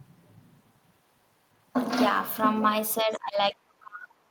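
A speech recording whose level sinks sharply from 3.02 s to the end, dropping by roughly 35 dB: speech suppressed in double talk, likely an echo canceller turning down the talker along with the loudspeaker echo.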